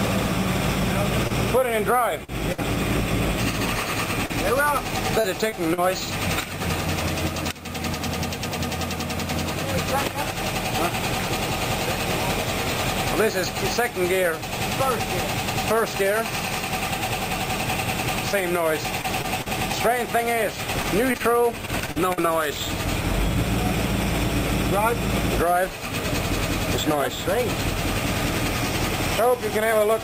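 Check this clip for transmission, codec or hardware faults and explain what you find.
Repeated packet loss (robotic sound) affects four stretches: 1.27–2.60 s, 4.26–5.79 s, 19.01–19.48 s and 20.82–22.30 s. Packets went missing in quick succession, and each hole, none longer than about 57 ms, was papered over by extending the preceding sound before the next dropout arrived. The audio turns choppy, with small pieces gone. The densest run is 20.82–22.30 s, and at 19.01–19.48 s the patching fills nearly a fifth of that short span.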